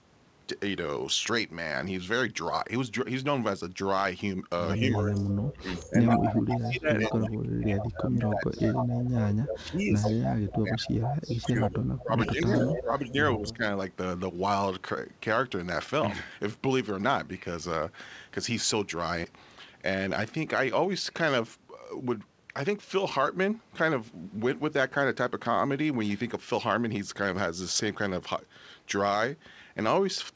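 Speech suppressed in double talk runs from 4.76 to 13.63 s. The speech dips by up to about 20 dB and thins or breaks off in pieces, for roughly seven seconds in all. This is likely an echo canceller that could not tell the near talker from loudspeaker echo and pulled both down.

Echo leak overlaps it, at 4.98 to 7.17 s, 7.79 to 9.28 s and 10.01 to 13.11 s. A copy of the speech trails 124 ms behind, roughly 5 dB under it, heard within a band that stops at 8 kHz, which fits G.722 coding. The echo canceller likely failed to remove all of the loudspeaker sound reaching the microphone and sent the remainder back.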